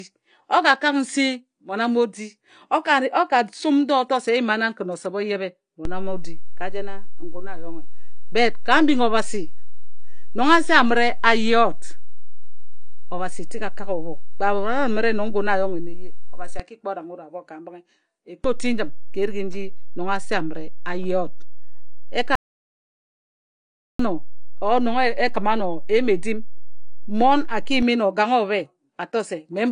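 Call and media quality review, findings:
AAC compression, throughout: speech plainly dull and smeared, nothing above 9.8 kHz, codec damage clearly audible. Likely AAC-LC at a low bitrate, consistent with about 32 kbps.

DC step, 5.85–16.6 s (starts after "o yebhe") and 18.44–27.83 s: waveform zero line jumps and holds, then returns. Low thump at each shift while the speech continues unchanged.

Audio dropout to silence, 22.35–23.99 s: 1.64 s of speech lost, with no room tone in the gap. Likely input loss from a disconnected device, a failed link or a mute, while recording continued.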